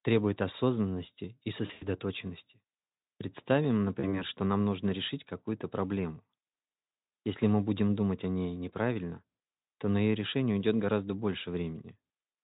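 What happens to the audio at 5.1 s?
Nothing goes wrong at 5.1 s; the speech carries on intact through that moment, with the Speex coding showing no damage there.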